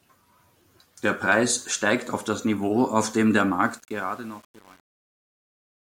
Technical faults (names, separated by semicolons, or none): truncation distortion on a fade